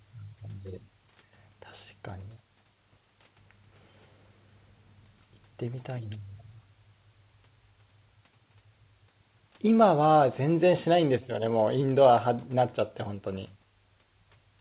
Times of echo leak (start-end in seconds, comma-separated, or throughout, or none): none